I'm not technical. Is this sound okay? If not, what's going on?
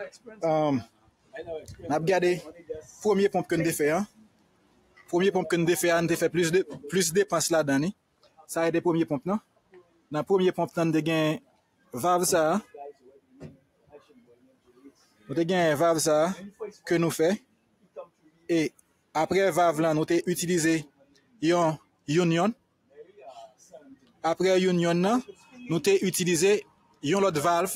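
No. A noise suppressor applied to music or sounds was left on the whole time. It was built for speech, so it treats steady tones and lingering tails as noise and turns them down. Sudden hits get through, but held sounds sink, so the level keeps pumping up and down.

The clearest spots are sound cut by the noise suppressor: 0.12 to 3.03 s, 4.07 to 5.13 s, 7.93 to 10.12 s, 11.4 to 15.3 s, 16.51 to 19.15 s, 20.84 to 24.24 s, 25.29 to 25.57 s and 26.64 to 27.04 s. In each, sustained sound fades or stops early.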